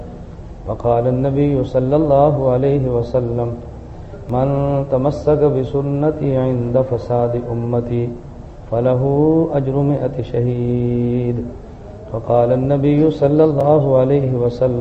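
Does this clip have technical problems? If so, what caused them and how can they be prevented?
Yes. There are two blocks of digital silence, at 4.30 s and 13.61 s. In each, the sound drops to silence and returns with no fade. The first gap is about 0.67 ms, heard as a tick or dip. The second is about 2.67 ms, also short enough to be heard as a tick or dip. These lengths fit small processing blocks of roughly 32 and 128 samples that the program failed to fill in time. Unlike a packet-loss dropout or a concealment glitch, nothing is smeared or faded. The signal simply stops dead and restarts. Prevent it by giving the audio thread larger buffers or higher priority and by guarding calculations against invalid values.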